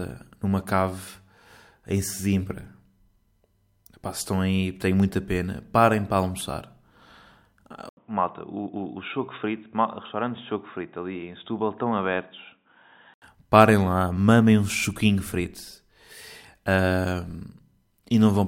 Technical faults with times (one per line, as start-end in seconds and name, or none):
7.89-13.22 input switched to a poorer device